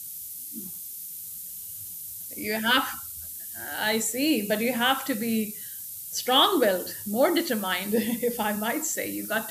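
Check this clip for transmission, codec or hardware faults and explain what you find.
One fault runs through the whole speech clip: low bit depth with noise shaping. The sound is quantised to about 6 bits, and the rounding error is fed back to push it into the treble. The result is a steady, thin hiss only a few dB below the speech, rising toward the top. On a spectrogram it shows as a constant noise floor brightening upward, and the waveform looks stepped.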